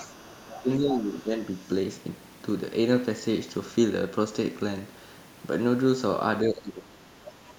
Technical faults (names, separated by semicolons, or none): other side's voice leaking through; speech suppressed in double talk